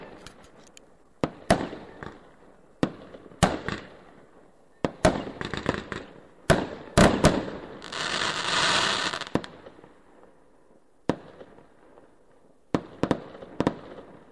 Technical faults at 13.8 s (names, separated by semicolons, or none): none